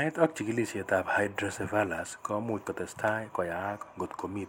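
Dropped buffer (overrun) at 0.36 s, just before "chigilisiet ab", and again at 1.56 s, right after "ak chigilisiet ab": each is a small jump in the sound, likely from samples being overwritten before collection, losing roughly 10 ms and splicing the speech together without any gap.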